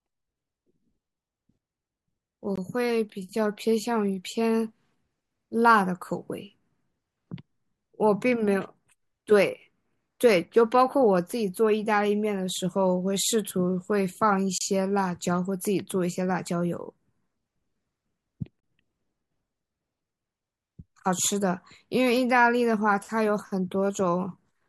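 Gaps between stream segments occur at 2.56–2.58 s, 14.58–14.61 s and 18.60–18.63 s. Adjacent 4-second segments were timestamped slightly apart, so the player filled the holes with silence, about 20 to 31 ms each, producing sharp-edged dropouts in the speech while nothing is actually missing.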